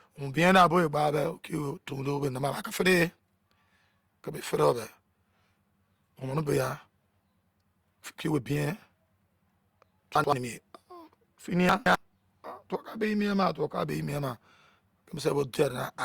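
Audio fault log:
10.16–10.33 s and 11.69–11.95 s, chunks out of order: the audio moves in blocks of about 85 ms, which fits a 4096-sample block at 48 kHz. In the first span one block plays one position late, after the block that should follow it. In the second span a block plays two positions late. Nothing is missing, but each span has three hard joins where unrelated waveform segments meet, so the sound jumbles briefly.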